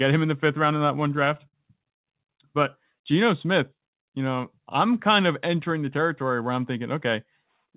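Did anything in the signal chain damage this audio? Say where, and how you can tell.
Yes. In the network and jitter buffer stage, packets arrived late between 0.74 and 2.06 s. Fourteen stalls, the longest 88 ms, were filled by continuing the previous sound, so the speech drags and stutters.

From 2.96 to 3.80 s, the jitter buffer slowed playback to build reserve, repeating pitch periods to add 54 ms. The speech runs at 94% speed without changing pitch.

From 5.91 to 6.49 s, the jitter buffer sped up to shed excess delay, trimming about 50 ms of pitch periods. The speech runs at 108% speed and sounds hurried over the G.711 path's 4 kHz band.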